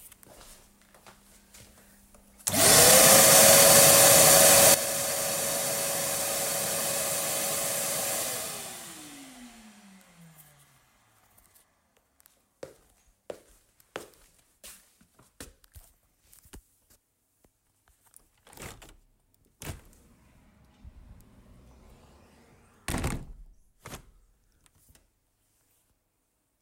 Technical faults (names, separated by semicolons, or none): sudden gain jump